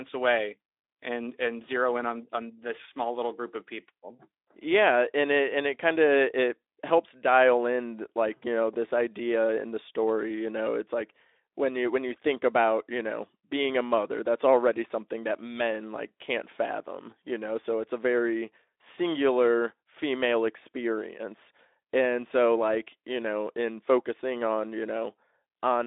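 Listening to this speech recording, nothing stood out as a technical problem at any point.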